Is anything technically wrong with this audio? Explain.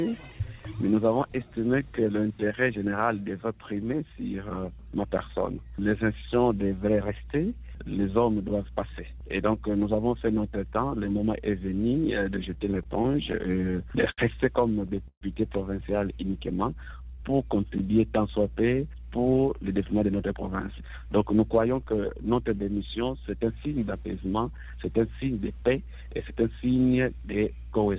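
Yes, there are four timing faults, all heard through a narrowband call path whose sound stops at 4 kHz, which fits a G.711 A-law connection.

Repeated stalls (stutter), 12.54 to 14.20 s: packets kept arriving late, so the receiver's jitter buffer ran dry over and over. Each time it stretched the last sound to fill in, about 236 ms altogether, the longest hold 76 ms. Nothing is lost, but the audio stumbles and drags.

Call audio freeze, 15.08 to 15.23 s: the sound stops and is held for 134 ms, fading into about 60 ms of silence before resuming where it left off. The likely cause is delayed packets briefly emptying the buffer, so a gap is inserted while nothing is skipped.

Jitter buffer slow-down, 16.51 to 17.37 s: the buffer was running low, so the receiver repeated single pitch periods to rebuild a reserve, adding 99 ms. The audio plays at 89% speed with unchanged pitch, sounding drawn out.

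Jitter buffer speed-up, 19.18 to 21.74 s: the buffer held more audio than it wanted, so the receiver cut short pitch-period pieces, removing roughly 0.3 s. Playback runs at 111% speed at the same pitch, sounding hurried.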